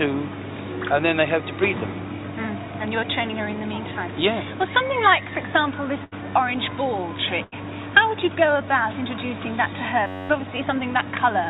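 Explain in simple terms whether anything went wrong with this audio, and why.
Twice the sound briefly smears into a short held tone or fading hiss and then jumps ahead: at 6.04 to 6.14 s and again at 7.44 to 7.54 s. This is a burst of packet loss. Several consecutive chunks of audio never arrived in time, so the receiver stretched out the last sound it had for about 75 to 84 ms, letting it fade. When fresh audio arrived, roughly 80 ms of the original had been skipped.

Near the end, from 10.07 to 10.29 s, the sound turns into a harsh, steady buzz with a pitch of about 94 Hz. This is a system hang loop. The computer stalled while the sound hardware kept replaying the same tiny slice of audio, just under 11 ms long, about 21 times in a row. That slice length fits a 512-sample buffer. Roughly a fifth of a second of real audio was lost and replaced by this buzz. Throughout the clip the call connection also cuts off everything above 4 kHz, which gives the typical dull phone-line sound.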